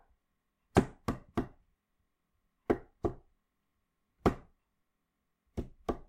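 Nothing in these everyday sounds gives away any technical trouble at any point along the way.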